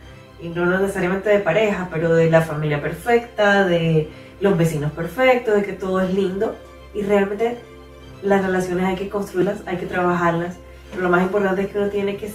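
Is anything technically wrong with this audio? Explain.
Yes. At 9.41 to 9.44 s there are compressed frames skipped. Several whole frames never reach the output, either missing from the stream or rejected by the decoder as damaged, so the sound leaps forward by about 150 ms. That span fits a handful of 20 ms frames. On a waveform, the envelope shows an abrupt discontinuity. On a spectrogram, a vertical mark sits where the sound's patterns break off.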